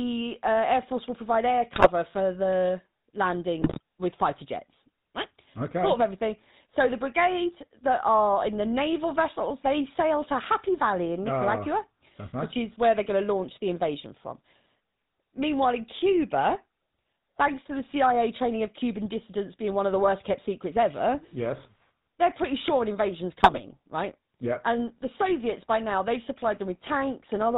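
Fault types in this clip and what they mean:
GSM full-rate codec: buzzy, gravelly roughness and no content above 4 kHz throughout, from the early 13 kbps mobile codec rebuilding speech from a pulse-driven vocal-tract model.
GSM bit errors: squawks, pops and gargling bursts near 1.74, 3.62 and 23.37 s, where corrupted filter, pitch or gain values reach the decoder on a weak link.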